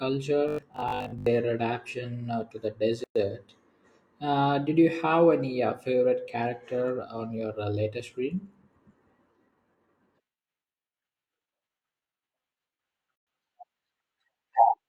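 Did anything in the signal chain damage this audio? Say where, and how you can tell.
Yes. From 0.48 to 1.26 s, before "adaptation uh to the", the speech becomes a rigid 50 Hz buzz. This is robotic sound from repeated short buffers, likely a starved driver buffer looping 20 ms chunks.

Gaps at a join of encoded pieces open at 3.04 s, after "adaptation uh to the", and 13.16 s. They are silences of about 116 and 112 ms, 10 s apart, which points to untrimmed encoder padding at the joins.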